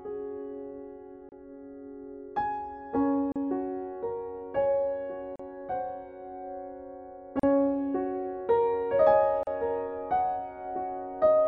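Gaps at joins of encoded pieces open at 1.29, 3.32, 5.36, 7.40 and 9.43 s, repeating every 2 s. Separately encoded pieces were joined untrimmed, so encoder delay and end padding leave silences of 30 ms, then 37.6 ms. Each has smeared edges before the sound resumes where it stopped.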